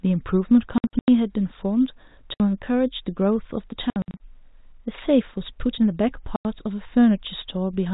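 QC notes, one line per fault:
0.78–1.08 s, 2.34–2.40 s, 3.90–4.20 s, 6.36–6.45 s: packet loss filled with silence. Speech cuts to dead silence in steps that fit 30 ms packets, scattered in the first and third spans, gaps up to 90 ms, with hard edges.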